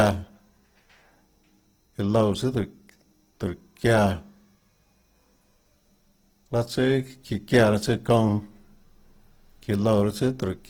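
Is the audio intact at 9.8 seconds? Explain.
No. At 9.8 seconds, as across the whole clip, the speech sounds grainy and rough, with a noisy, coarse texture in place of clean tone, yet the top end stays open rather than muffled. This is plainly audible Opus compression, likely in its music (CELT) mode at a low rate, which fits about 16 kbps: band energies are kept but short of bits the encoder fills detail with folded copies or noise, roughening the sound instead of dulling it.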